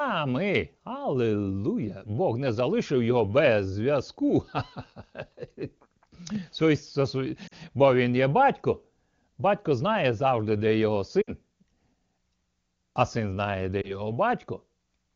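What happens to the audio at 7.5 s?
Lost AMR speech frames from 7.47 to 7.54 s: about 40 ms of corrupted frames, which fits two 20 ms frames, were concealed by repeating the last good parameters at falling gain. This causes a quick drop toward near silence before the speech returns.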